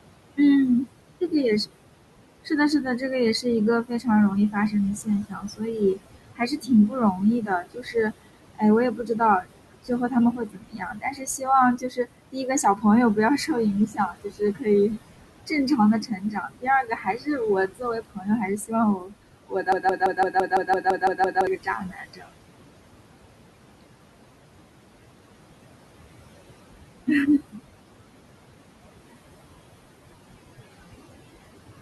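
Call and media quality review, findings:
Block size mismatch (truncated): steady 100 Hz buzz throughout, from block tails being discarded between two processing stages at that block rate. Pace and pitch sound normal. The fixed buzz frequency separates it from mains hum or codec roughness.

Noise suppressor artifacts: throughout, background pumped down by about 21 dB between phrases and rising under speech. The room noise, about 12 dB below speech, is what gets gated. The fluctuation follows the speech envelope, unlike a constant buzz.

Speech cut by the noise suppressor: 2.45–22.51 s, with around seven seconds of speech in total swallowed, dropping by up to about 22 dB. Parts of the speech are turned down with the background. The level drops without repetition or gaps, which separates it from a dropout.

Broken-record loop: 19.72–21.47 s, a 0.17 s fragment repeated exactly 10 times back to back. 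Likely a stalled player or stream resending its last buffer, and the intended audio is lost. Identical repeats separate it from echo or packet-loss concealment.

Speech cut by the noise suppressor: 27.07–27.59 s, about a tenth of a second of speech pulled down by up to about 18 dB. A brief faint spot rather than silence points to suppressor gain, not a network drop.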